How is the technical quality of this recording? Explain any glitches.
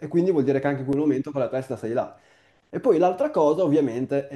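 The recording has one glitch: a brief dropout in the speech.

A block of digital silence occurs at 0.93 s, lasting about 2.9 ms. For that instant the output held only zeros, most likely because the audio software did not refill its output buffer in time. The length fits a 128-sample buffer. The signal drops to silence and returns with no fade, and a gap this short is heard as a tick or dip rather than an audible gap.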